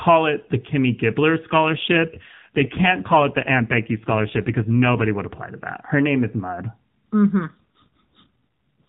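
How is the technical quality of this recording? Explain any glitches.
The recording has been through the AMR narrowband mobile codec, so nothing above 4 kHz comes through, and it twice suffers an AMR rate drop. From 1.52 to 5.08 s and again from 7.40 to 8.81 s, the network forced the codec to a lower rate, which fits a switch from 12.2 to 5.9 kbps. The speech turns rougher and more synthetic with no gap or band change.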